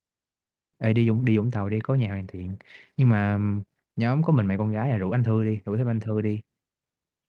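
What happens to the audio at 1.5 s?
That's a jitter buffer speed-up from 0.87 to 2.50 s: the receiver trims pitch-period slices to drain a backlog, so speech sounds hurried, same pitch.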